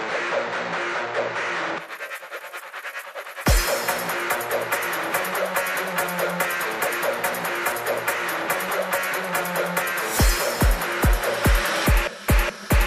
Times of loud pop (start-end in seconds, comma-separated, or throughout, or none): none